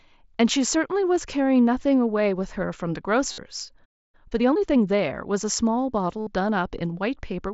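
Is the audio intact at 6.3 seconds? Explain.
Yes, but only just. Concealed Bluetooth headset packet loss runs from 6.20 to 6.27 s, about 68 ms, a run of several lost packets. The receiver filled the gap by repeating a short stretch of the preceding waveform, so you hear a buzzy held tone at full level with a small warble as the real audio comes back right around 6.3 s.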